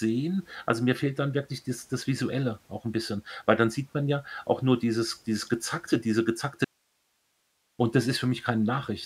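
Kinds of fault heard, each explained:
Audio dropout to a faint residue: the speech cuts off abruptly at 6.64 s and returns at 7.79 s, leaving a gap of about 1.15 s that holds only hiss, roughly 45 dB below the signal, likely from the wanted feed being lost while the downstream path stayed live.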